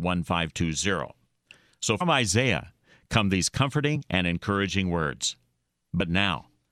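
Speech with compressed frames skipped at 2.0 s, 3.95 s (between "come these" and "and encouraging words") and 5.99 s. The audio jumps forward by about a tenth, a fiftieth and a twentieth of a second, which fits whole 23.2 ms frames going missing. Each join is a brief smeared blip, visible as a small waveform discontinuity and a faint vertical smudge on a spectrogram.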